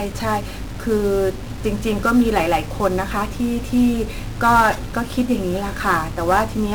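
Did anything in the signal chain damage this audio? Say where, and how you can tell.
Yes. Throughout the speech, quiet passages and word tails turn gritty, with a coarse distortion that rises and falls with the voice instead of sitting as a steady hiss. The error sits only about 25 dB below the signal, which points to sample-format conversion, likely truncation to around 7 bits without dither. On a waveform, low-level stretches look stair-stepped or drop to silence. A spectrogram shows harmonic-related grit tracking each syllable.

The second fault is 1-bit DFPWM compression at the codec stage. The whole clip is fuzzy and crackly, and the treble is buried under broadband hiss that persists under every syllable. This is consistent with a stream of one bit per sample at about 48 kbps. Each bit can only push an adaptive level up or down, so the encoder constantly overshoots and undershoots. 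On a spectrogram a dense noise wash fills the upper bands. The waveform looks jagged and slope-limited.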